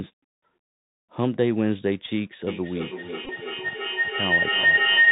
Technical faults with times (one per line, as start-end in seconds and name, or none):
0.00-5.11 Bluetooth CVSD headset codec
2.47-5.11 feedback howl
3.25-3.30 Bluetooth headset packet repeated